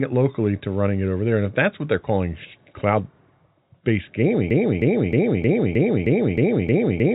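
A stall in the player, encoder or stream most likely left it resending the last fragment it held, causing a broken-record loop in this telephone-band speech, which carries nothing above 3.8 kHz as G.711 coding would. From 4.51 s to the end, one 0.31 s piece repeats exactly, back to back, eight times, and whatever should have been heard in that stretch is lost.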